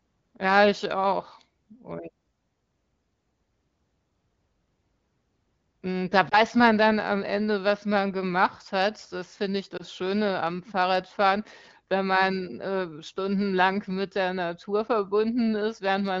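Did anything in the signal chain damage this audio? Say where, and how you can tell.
Yes. Lost AMR speech frames on the radio link cause two brief dips or warbles, at 6.29 to 6.39 s just before "man dann am" and at 9.77 to 9.83 s right after "hat das finde ich". Each disturbance is short enough to point to a single 20 ms frame failing its checksum. The AMR-WB decoder, running at 15.85 kbit/s with only light coding damage, filled each gap by repeating the previous pitch and vocal tract settings at reduced gain, so the sound smears briefly before recovering.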